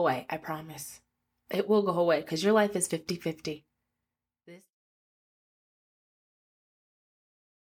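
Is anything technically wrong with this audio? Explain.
No, nothing stood out on listening to this speech clip, and the fade-out that begins around 3.5 s and is complete by 4.76 s is smooth, with no click or abrupt edge.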